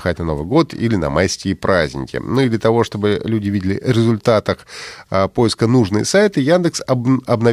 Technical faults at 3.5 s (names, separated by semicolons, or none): clock slip clicks